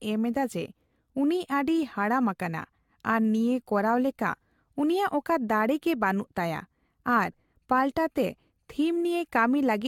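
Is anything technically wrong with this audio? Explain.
Yes. Throughout, the speech sounds swirly, hollow and smeared, with blurred attacks and nothing above 17 kHz. This is likely generation loss: roughly seven successive re-encodes, consistent with AAC-LC around 96 kbit/s, each pass stacking fresh quantisation noise.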